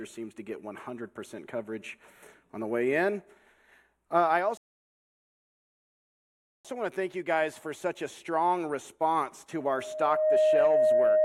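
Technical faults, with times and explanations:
4.57 to 6.65 s, rebuffering stall: the sound drops to silence for about 2.07 s, then picks up exactly where it left off. The player ran dry of downloaded audio and waited for more. Nothing's missing, the clip just gets stretched by that gap.
9.55 to 11.25 s, loudspeaker feedback squeal: a 620 Hz tone swells up over roughly three quarters of a second and sits around 10 dB above the sound, running to the end. A mic is hearing its own loudspeaker, and the loop gain tops one at that pitch.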